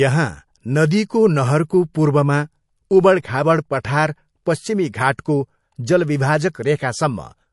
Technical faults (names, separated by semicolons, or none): MP3 compression